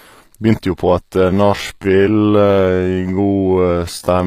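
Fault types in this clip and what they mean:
HE-AAC compression: The treble throughout sounds synthesized rather than captured. Sibilants come across gritty and metallic, and upper harmonics do not line up with the lower body of the speech. This is likely HE-AAC coding, which codes only the lower spectrum and rebuilds the top by copying lower bands upward under a coarse envelope. The plainly audible damage fits a low bitrate of 24 kbps in the v2 mode.
time-stretched section: From 1.27 s to the end, the speech abruptly slows to 0.543 times its original pace while its pitch stays unchanged. This is likely a software stretch that preserves pitch by repeating short segments to lengthen the audio. At a ratio this low, much of the material is repeated, so the slowed portion drags.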